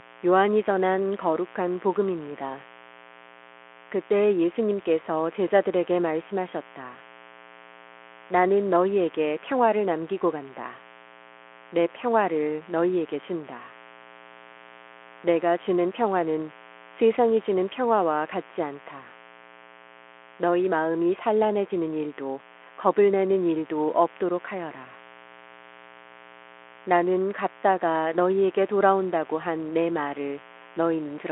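A mains buzz runs under the speech from start to finish. It sits at 60 Hz, with a raspy edge rather than a smooth hum. Sharp switching spikes from a dimmer, a rectifier or an unshielded cable have leaked into the signal, twice per mains cycle. Those spikes spread harmonics far up the spectrum. The buzz is well below the speech level but never lets up. It stays audible through the narrow telephone-style band of the Speex connection.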